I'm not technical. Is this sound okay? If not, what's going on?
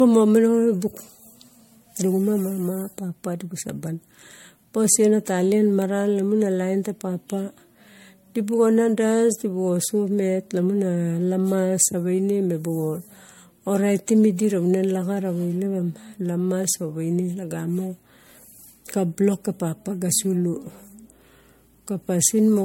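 No. Throughout, the speech sounds swirly, hollow and smeared. This is generation loss, likely from being compressed and re-saved about four times over.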